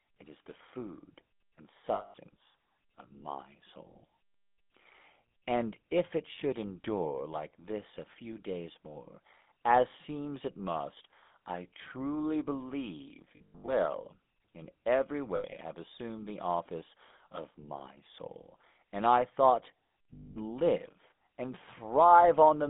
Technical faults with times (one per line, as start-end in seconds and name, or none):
0.00-22.70 GSM full-rate codec
1.94-2.14 lost GSM frames
13.36-13.71 lost GSM frames
15.36-15.58 lost GSM frames
20.14-20.37 lost GSM frames